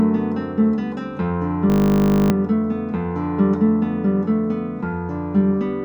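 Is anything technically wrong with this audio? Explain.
Yes, there's a system hang loop from about 1.7 to 2.3 s. The machine or its audio driver seems to have stalled while the sound hardware kept replaying the same stretch of its ring buffer. The repeating slice is 20 ms long, so it cycles at 50 Hz and comes across as a steady, flat buzz rather than a stutter. The repeats suggest about thirty passes, and roughly 0.7 s of the real audio is missing.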